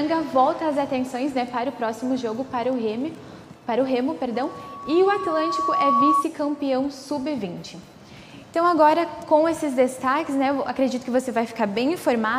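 From 4.34 to 6.27 s a loudspeaker feedback squeal rises: the microphone re-amplifies its own loudspeaker until a 1.1 kHz tone swells over about a second and a half to a few dB above the sound. A spectrogram shows one bright horizontal line; the waveform envelope ramps up.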